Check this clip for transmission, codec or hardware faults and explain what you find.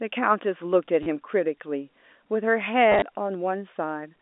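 Packet loss with the last packet repeated affects this telephone-band speech, whose 250 Hz to 3.6 kHz line band is carried by G.711 A-law coding. At 1.03 to 1.06 s, about 30 ms went missing, which fits three lost 10 ms packets. From 2.92 to 3.02 s, about 60 ms dropped out in scattered runs of up to 20 ms. Each time, the receiver replayed the last packet until new ones arrived, out of step with the pitch, so the sound stutters robotically.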